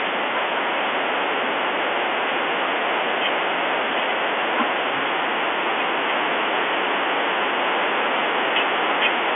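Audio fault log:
No faults can be heard in this speech recording. It comes through G.711 telephone coding, so the sound sits in the 300 Hz to 3.4 kHz line band with nothing above 3.6 kHz.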